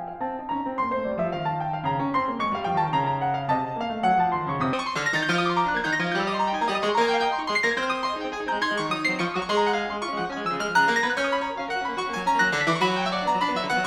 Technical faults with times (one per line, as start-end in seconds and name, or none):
4.73-13.86 audio read two samples at a time (double speed)